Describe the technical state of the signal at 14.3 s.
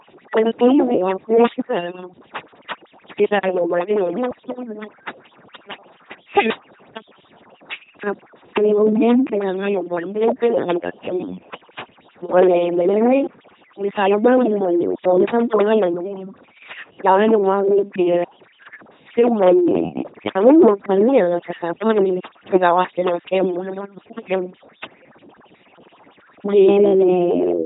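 At 14.3 s the speech is running through an LPC-10 vocoder, as it does across the whole clip. Each instant gets treated as fully voiced or fully unvoiced and rebuilt from a pulse train or noise, so it comes out buzzy and robotic, with nothing above 3.8 kHz. The heavy damage points to LPC-10's 2.4 kbit/s rate.

Overdone noise removal is also present there and throughout. The noise reduction bites too hard, switching off bands it mistakes for noise and taking quiet parts of the speech with them. The background drops and breaks up into twinkly specks.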